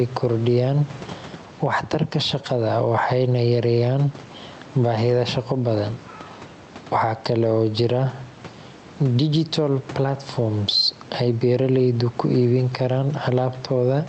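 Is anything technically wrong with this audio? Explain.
Yes. Gain pumping runs throughout: the background sits about 28 dB below the speech, and the pumping likely comes from excessive microphone gain feeding a fast limiter. The swing is around 10 dB. On a waveform, the peaks look flattened. On a spectrogram, everything sits beneath the call codec's 8 kHz ceiling.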